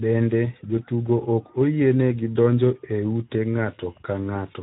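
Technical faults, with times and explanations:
Throughout: Speex codec. The speech sounds plainly hoarse and noisy, and nothing remains above 3.8 kHz. Too few bits for the excitation suggest a low bitrate, near 11 kbps.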